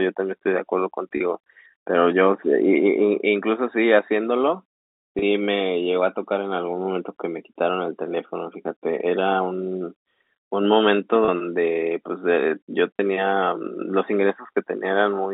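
Telephone-band speech, cut off around 200 Hz to 3.7 kHz, has four packet loss with pitch repetition blips at 1.17, 5.19, 11.25 and 12.96 s. Each is a 30 ms gap, consistent with a single dropped packet, bridged by repeating the last pitch period, so it comes across as a brief held, buzzy catch.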